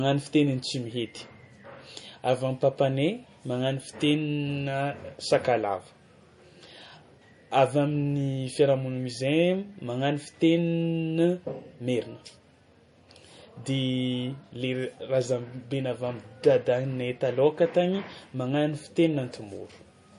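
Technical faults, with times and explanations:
Throughout, MP3 compression: the speech sounds watery and swirly, with nothing above 10.6 kHz, likely from MP3 encoding at a low bitrate that fits about 40 kbps. Weak frequency lines flicker between frames, so unlike a plain low-pass filter, the texture itself warbles.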